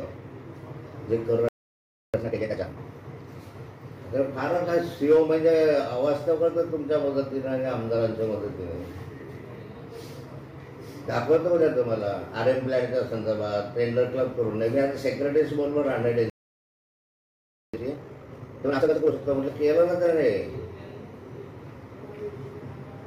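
At 1.49 s the audio cuts out in a playback stall and stays silent until 2.14 s, a gap of about 0.65 s. A second, longer stall runs from 16.30 s to 17.74 s, about 1.44 s. In both cases the player was likely starved of data or blocked. On a waveform each stall is a flat line cutting through active signal. On a spectrogram it is a clean vertical band of black across every frequency, with sharp edges on both sides.

Each stall is followed by time-compressed catch-up. The first runs from 2.14 s to 2.78 s and the second from 17.74 s to 19.16 s, both at 2.0x speed. To work off the backlog, the player removes short slices and cross-fades across the joins. The sound rushes forward at unchanged pitch. The spectrogram keeps its harmonics at the same heights while the events crowd together in time. Small smeared seams mark the splice points.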